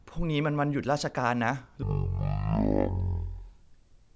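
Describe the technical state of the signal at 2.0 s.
Wrong sample rate from 1.83 s onward: playback fits 44.1 kHz audio run at 16 kHz, so speech slows to 0.36 speed and drops 17.6 semitones.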